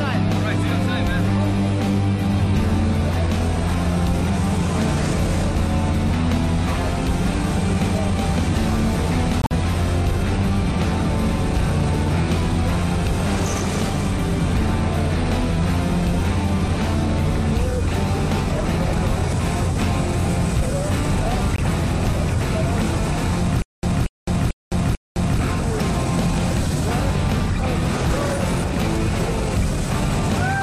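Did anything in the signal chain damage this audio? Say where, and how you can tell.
Yes. Corrupt frame muted at the codec stage: the sound cuts abruptly to digital silence from 9.42 to 9.51 s (about 96 ms, which fits roughly five frames) and again at 21.56 to 21.60 s (36 ms, one frame). Timing continues unshifted. The waveform shows flat silent blocks and the spectrogram shows clean black vertical bands.

Stutter with silent gaps, likely from a playback or network stall: from 23.62 to 25.39 s the same 233 ms burst returns four times, separated by 210 ms of silence, on an even 443 ms cycle. The waveform shows identical repeated blocks between flat lines, and the spectrogram shows matching columns with black gaps.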